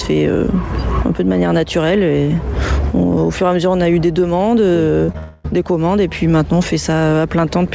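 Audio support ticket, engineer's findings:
Short concealed packet loss at 5.06–5.10 s and 5.12–5.16 s. Two brief smears, each bridging roughly 20 ms of missing audio, played from the decoder's continuation of the preceding sound and then cross-faded back into real audio. Unlike a dropout, each is a momentary wobble lasting a couple of hundredths of a second, with no audible gap.

Long network dropout at 5.18–5.46 s. A sustained synthetic buzz/hiss about 0.26 s long, decaying without ever reaching silence. The audio resumes with that stretch absent. Likely a packet burst loss right after the two short hits, with the jitter buffer's concealment covering the whole hole. This is told apart from short loss by its duration and fading extrapolated tone rather than a brief smear. The G.722 band limit at 8 kHz applies throughout.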